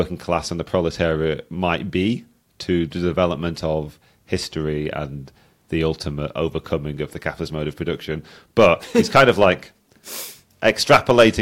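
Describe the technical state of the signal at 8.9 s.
The audio at 8.9 s is intact, with no fault present at that moment.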